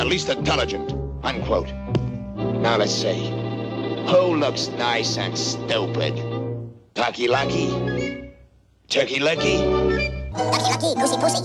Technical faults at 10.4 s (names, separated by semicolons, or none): section at the wrong speed